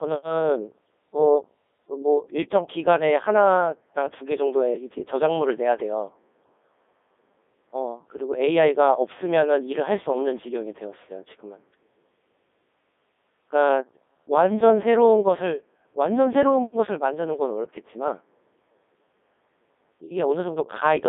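Throughout, the speech passes through the Codec 2 vocoder, consistent with its 3.2 kbit/s mode. It is rebuilt from sine waves, so it sounds robotic and buzzy, confined to 250 Hz to 3.6 kHz.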